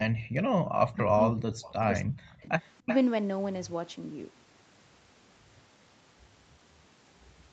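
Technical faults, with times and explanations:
0.16–0.65 s, 0.84–2.51 s and 2.79–2.90 s: speech suppressed in double talk. With both ends likely talking at once, the echo canceller could not separate this talker from loudspeaker echo and turned both down. The speech sinks by around 40 dB and breaks up, longest in the middle stretch.
1.67–1.72 s, 2.61–2.70 s and 2.86–2.97 s: echo leak. The far end's echo canceller likely let part of its microphone's loudspeaker pickup through, sending back a copy of the speech 328 ms late in short scraps. It is well below the speech, then faint, then almost as loud at 2.86 s.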